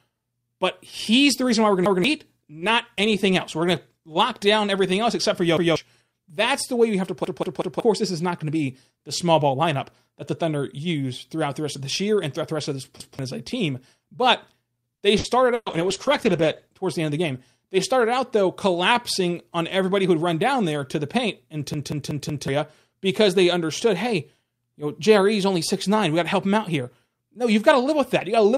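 Speech with four kinds of fault. Repeated buffer stutters appear at 1.86–2.04 s, 5.57–5.76 s, 7.25–7.80 s (three extra plays), 13.00–13.19 s and 21.74–22.48 s (four extra plays): a 186 ms segment, which fits an 8192-sample buffer, replays with a hard join because fresh audio arrived late, costing roughly 0.2 to 0.7 s each time. A burst of packet loss hits at 15.18–15.27 s (60 ms concealed) and 15.54–15.69 s (120 ms concealed, with about 30 ms of silence); the receiver stretches and fades the last sound into a held buzz or hiss, then resumes further on with that stretch gone. Overlapping this, a call bitrate drop from 64 to 14 kbps runs from 15.65 to 16.92 s, bottoming out for about 1.2 s, so the encoder codes coarsely and trims high frequencies, leaving the speech rough and muffled. Immediately afterward, a jitter buffer speed-up from 16.99 to 17.35 s removes around 50 ms of pitch periods to shed excess delay, playing the speech at 111% speed with unchanged pitch and a hurried feel.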